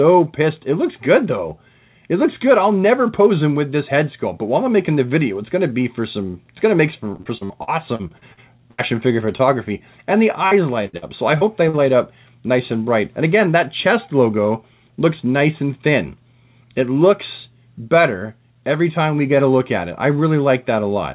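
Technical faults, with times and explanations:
7.16–8.81 s and 10.47–11.76 s: repeated packet loss (robotic sound). Packets kept going missing or arriving too late, and each hole was filled by stretching out the last good sound before the next hole came. The first stretch holds 11 gaps and the second holds 5, the longest about 75 ms. Roughly a quarter of the first span and a sixth of the second is patched-over sound, giving a choppy texture with pieces absent.
11.77–12.25 s and 13.40–14.46 s: jitter buffer speed-up. After late packets bunched up, the receiver held more audio than it wanted and trimmed tiny slices of a pitch period or so, over and over, to catch up. Both stretches play about 6% fast with pitch unchanged, removing roughly 40 ms and then about 70 ms. The result sounds slightly hurried. The call path's G.711 A-law coding at 64 kbps leaves nothing above 4 kHz.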